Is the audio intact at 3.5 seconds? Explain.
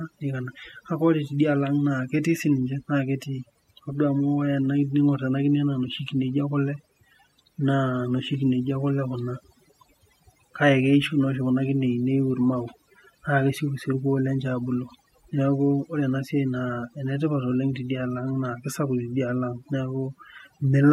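No. At 3.5 seconds the speech carries overdone noise removal, as it does throughout the clip. The noise reduction was set too aggressively, so bands it judged to be noise were cut hard, along with the quieter parts of the voice. The background drops and breaks up into twinkling specks.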